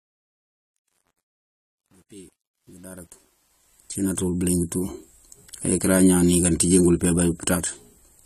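From 0.0 to 4.2 s the audio shows truncation distortion on a fade, worst from 0.0 to 3.48 s. The fade stage kept too few bits and added no dither, so the quiet waveform collapses into coarse steps and sounds gritty, consistent with roughly 9-bit resolution.

Throughout, there is a hard band limit with nothing above 14.1 kHz and plainly audible codec damage, likely from AAC compression at a low rate fitting about 32 kbps AAC-LC. The coarse quantisation of each frame's spectrum leaves the speech dull and smeared.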